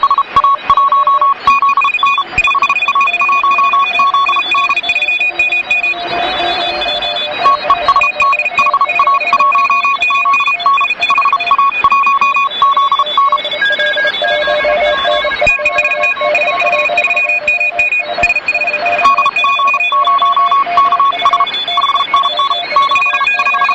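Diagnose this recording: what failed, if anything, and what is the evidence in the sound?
Nothing failed in this recording of sounds. No point in it shows evidence that would trace a problem to any stage of the chain.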